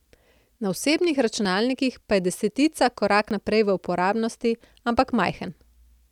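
It's a speech recording with two points where the sound jumps forward, at 1.45 s and at 3.31 s, between "pa je desetica" and "naprej v uporabnosti". Each likely comes from a dropped buffer (overrun), with roughly 20 ms skipped and the two sides butted together without any gap.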